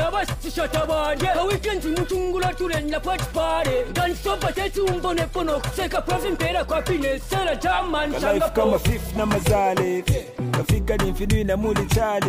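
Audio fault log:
No faults heard anywhere in the clip.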